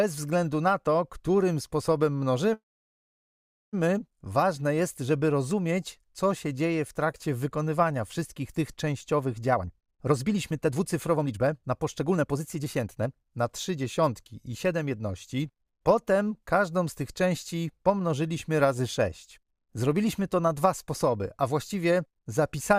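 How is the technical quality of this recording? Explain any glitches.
The recording has two timing glitches, a stall early on and a rushed stretch later.

From 2.53 to 3.75 s there's a call audio freeze. The last bit of sound smears briefly, then about 1.1 s of silence follows before the audio picks up where it left off. That's likely packets stuck in transit draining the jitter buffer, so nothing's lost but a 1.2 s gap gets inserted.

Between 9.53 and 14.99 s you get a jitter buffer speed-up. The audio plays at about 122% speed with unchanged pitch, so it feels hurried. The receiver was trimming tiny pitch-period slices repeatedly to burn off excess buffered delay, roughly a second in total.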